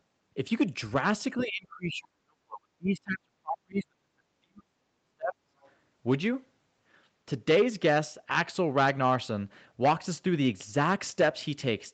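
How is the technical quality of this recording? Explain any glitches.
The recording has two real problems: the talker keeps getting squashed early on, and a faint bit of the far end sneaks through just after. It all sits inside a call-style band that stops around 8 kHz, which fits an Opus stream at roughly 32 kbps.

Speech suppressed in double talk runs from 1.43 to 4.25 s and again from 4.41 to 5.54 s. The talker's level sinks hard, at its deepest by roughly 40 dB, for around three seconds in the first stretch and about a second in the second. That's likely the echo canceller hearing both sides at once, failing to tell the near voice from loudspeaker echo, and pulling everything down, so the speech fades.

The other side's voice leaking through shows up right after, at about 5.61 to 5.71 s. It's a tiny scrap, roughly 35 dB below the main speech. What you're hearing is likely far-end audio from the talker's loudspeaker that the canceller didn't fully strip from the mic. 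It's so brief and low that it comes across as a faint blip.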